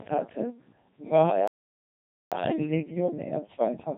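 From the start, the speech has passed through the Codec 2 vocoder, which discards the waveform and rebuilds the voice from pitch, voicing, energy and a spectral envelope. The heavy damage, which fits a 2.4 kbit/s mode, makes the voice sound buzzy and robotic.

At 1.48 s, just after "hatte war", a playback stall cuts the output, most likely because the player ran short of data or its thread was blocked. The speech drops to silence for about 0.84 s, until 2.32 s, before resuming.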